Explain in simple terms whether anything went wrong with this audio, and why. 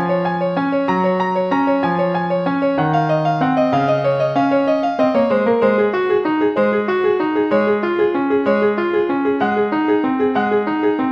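Listening closely, nothing in this recording stood out as having gone wrong.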